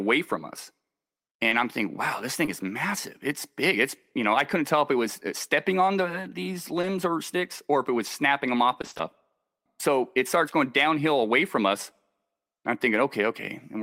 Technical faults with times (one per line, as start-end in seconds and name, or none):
1.49-1.53 short concealed packet loss
2.45-2.49 short concealed packet loss
6.81-6.85 short concealed packet loss
8.81-9.01 repeated packet loss (robotic sound)